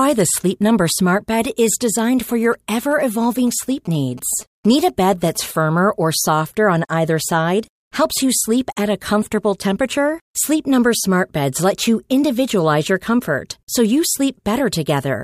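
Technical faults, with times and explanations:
2.29 to 5.37 s, GSM signalling bursts: a nearby 2G phone, exchanging its short groups of radio bursts with the network, couples into the audio circuit, which rectifies the carrier and turns each burst into audible tone. Just after "is designed" and running until "firmer or softer on", this is heard as a galloping dit-dit-dit of short buzzes pitched at about 217 Hz, the burst repetition rate, sitting roughly 25 dB below the speech.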